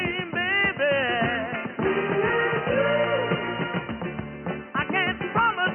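Nothing in the audio stood out as a technical problem on listening.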